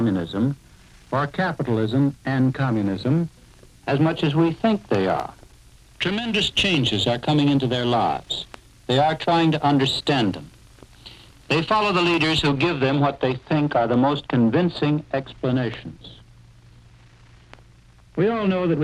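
From about 12.49 s through to the end, the sound goes noticeably dull and muffled, like a blanket got thrown over it. That's de-emphasis applied wrongly: a treble-cut curve meant to undo pre-emphasis got used on material that never had any boost, or got applied a second time. The highs slope off smoothly, ending up about 10 dB down at 10 kHz relative to 1 kHz, so the air and crispness just drain away.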